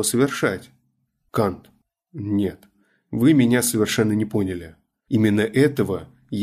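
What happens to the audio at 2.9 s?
Nothing goes wrong at 2.9 s; the speech passes through that moment intact, with no dropout, click or distortion.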